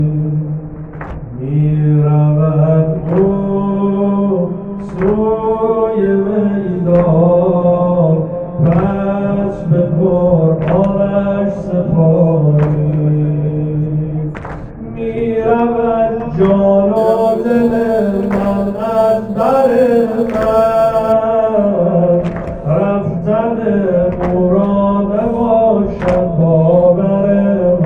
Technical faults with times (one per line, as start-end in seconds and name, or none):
16.96-21.12 crude rate conversion